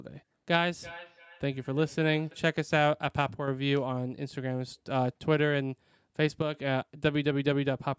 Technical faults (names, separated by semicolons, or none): feedback echo between two devices; one channel drops out